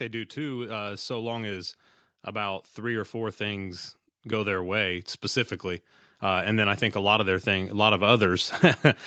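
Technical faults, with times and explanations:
0.34 to 8.59 s, automatic gain rising: the speech and the room noise behind it swell together, climbing steadily by about 16 dB over roughly eight seconds, so the end of the clip sits far louder than the start. The call's automatic gain control judged the incoming level too low and kept raising its gain in small steps. Because that gain applies to everything the microphone picks up, the background lifts along with the talker, all within the band-limited sound of the call, which stops at 8 kHz.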